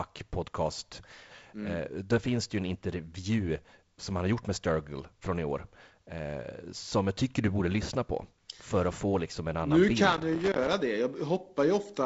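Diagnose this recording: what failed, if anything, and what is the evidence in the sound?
Loose connector crackle at 10.12 to 10.73 s, an irregular scratchy burst: a dirty contact in the analogue wiring making and breaking, chopping the signal.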